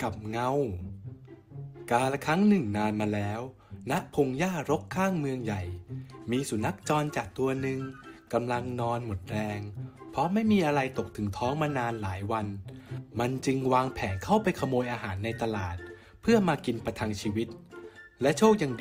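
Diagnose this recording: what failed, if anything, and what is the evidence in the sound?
Nothing in the recording points to a failure at any stage of the chain. There is no audible evidence of a problem to diagnose.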